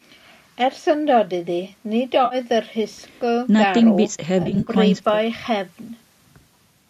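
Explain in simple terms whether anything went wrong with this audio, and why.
Two brief glitches come from AAC frame loss with concealment, likely in a low-delay AAC call stream. One is at 2.25–2.35 s, and the other is a cluster of short gaps at 4.43–4.71 s. Rather than falling silent as a plain dropout would, the speech turns briefly smeared and noisy there.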